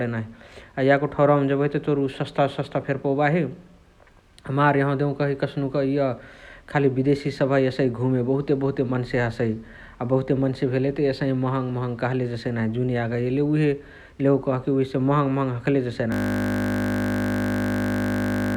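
From 16.12 s to the end, the speech gives way to a steady 50 Hz buzz: a system hang loop, where the machine froze and the audio hardware kept replaying one 20 ms slice of its ring buffer, over a hundred times.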